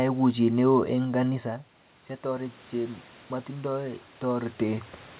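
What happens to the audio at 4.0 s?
At 4.0 s you're right in the middle of an automatic gain rise that runs from about 2.21 to 4.93 s. The level at the mic dropped by about 12 dB, so the gain control decided things had gone too quiet and started pushing its gain up, by about 8 dB over that stretch. You hear it as a slow swell, with the speech and the room noise behind it coming up together rather than the voice alone.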